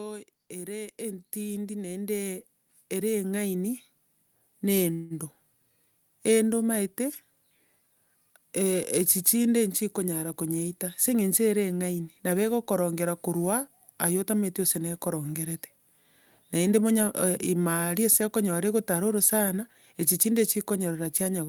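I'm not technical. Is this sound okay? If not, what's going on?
No. Automatic gain rising, from 0.48 to 5.35 s: the call's level control judged the sound too quiet and slowly turned it up, so speech and background both swell.

Call audio freeze, from 4.93 to 5.13 s: the sound stalls into a brief fading buzz or hiss for about 0.17 s, likely because delayed network packets left the receiver nothing to play; it then resumes without losing anything.

Jitter buffer speed-up, from 17.96 to 20.29 s: the receiver had built up extra delay and trimmed tiny slices to catch up, so speech runs about 6% faster at the same pitch.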